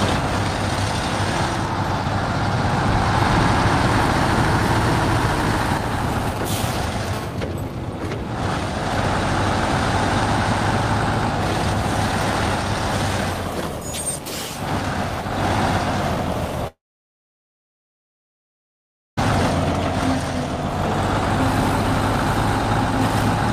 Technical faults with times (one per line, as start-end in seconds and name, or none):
6.13-7.09 GSM signalling bursts
7.13-8.30 GSM phone buzz
16.67-19.19 long network dropout